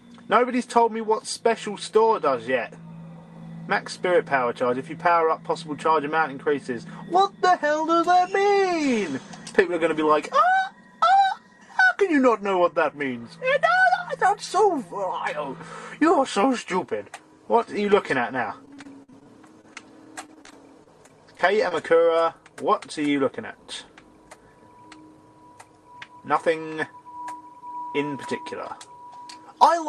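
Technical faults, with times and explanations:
18.65 to 21.73 s, repeated packet loss (robotic sound): the stream keeps dropping out in quick succession, with holes up to about 51 ms. Each is patched by stretching the last bit of sound, roughly 0.4 s in total, leaving it choppy with pieces missing.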